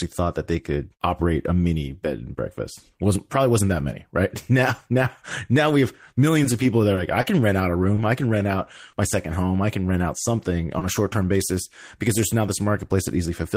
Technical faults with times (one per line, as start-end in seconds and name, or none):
6.13-6.17 short concealed packet loss
6.95-6.99 short stall from a late packet
7.21-7.25 short concealed packet loss
7.95-7.99 short stall from a late packet
8.91-8.95 short concealed packet loss
10.79-10.83 short concealed packet loss